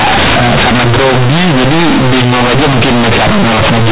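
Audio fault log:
Throughout: companded audio read as linear. The A-law bytes are being played straight as plain 8-bit samples with no expansion, so quiet and loud parts of the speech land at similar, huge levels. That's why it's so loud and buzzy, with heavy hiss filling the pauses.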